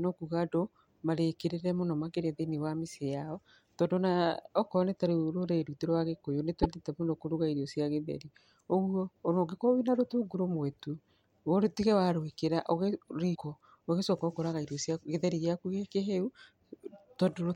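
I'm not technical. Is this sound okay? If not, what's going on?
No. The speech jumps briefly, with a short chirp or dropout, at 6.62 to 6.66 s (between "gĩkũyũ nĩ" and "mũno kũrũga irio cia") and at 13.34 to 13.37 s. The likely cause is a broken MP3 bit reservoir: missing pieces of the file leave the following audio briefly garbled.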